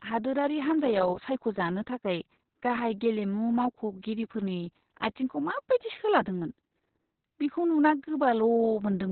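From start to finish the speech has been through Opus voice compression at a very low rate, about 6 kbps by the sound of it, coded by SILK alone in narrowband mode. With so few bits the codec drops the whole upper band, leaving essentially nothing above about 4.2 kHz, and it quantises the excitation crudely in long frames. The result is heavily damaged: muffled and telephone-thin, with a hoarse, buzzy, faintly robotic edge on every stretch.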